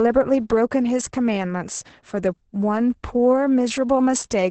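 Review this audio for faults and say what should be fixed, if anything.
Throughout the clip the speech sounds muffled, hoarse and slightly robotic, with nothing above about 8.6 kHz. This is heavy Opus voice compression: at a rate that fits roughly 10 kbps, the encoder seems to have run its SILK linear-prediction coder alone in wideband, keeping the band to around 8 kHz and coding the excitation coarsely, which leaves that rough, synthetic texture. To prevent it, encode at a higher Opus bitrate, or keep an uncompressed master.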